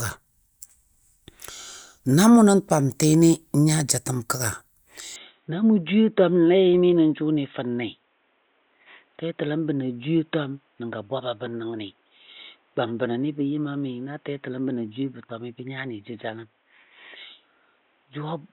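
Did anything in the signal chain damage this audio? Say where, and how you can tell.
Yes: from 5.16 s, with no gap, speech loses everything above 3.8 kHz and gains faint new hiss, likely an input switched to a poorer device. A codec cut wouldn't add noise.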